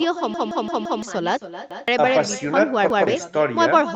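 Echo with no canceller runs through the whole clip: the far end's loudspeaker feeds back into its microphone and nothing removes it, so the talker's speech is shadowed about 0.3 s later by a thinner copy about 13 dB down.

The playback side suffers a repeated buffer three times. When fresh audio arrived late, the last 0.17 s chunk, consistent with an 8192-sample buffer, was replayed. From 0.34 to 1.02 s it plays four extra times, a hard-edged stutter that swallows about 0.7 s of speech. Single repeats follow at 1.71 to 1.88 s and 2.90 to 3.07 s.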